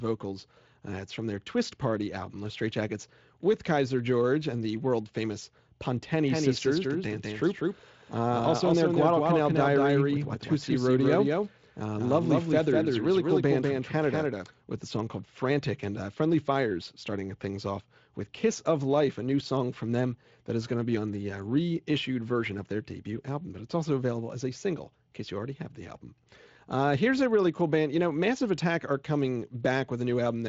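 A doubled audio track runs from 6.26 to 14.46 s. A second full-band copy of the speech trails about a fifth of a second behind the original. It is around 5 dB quieter, has no decay or room colour, and cuts in and out abruptly. The likely cause is a slower second capture path. Under it, light Speex coding leaves nothing above 7.6 kHz.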